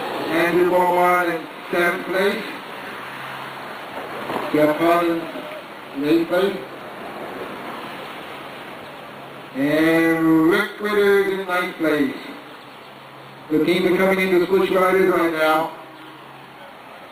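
From 0.82 s to 15.76 s there's a click about every 1.5 s, roughly ten in all. That steady rhythm likely comes from clock drift buffer slips: two clocks disagreeing by something like 100 ppm, so a handful of samples gets dropped or repeated each time.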